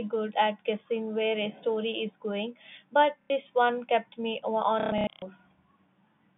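At 3.21 to 3.3 s, and again scattered from 4.8 to 5.22 s, there's packet loss with the last packet repeated: the receiver kept replaying stale audio, so you hear robotic stutters buzzing at roughly 33 Hz, which fits 30 ms packets, over the band-limited G.711 telephone sound.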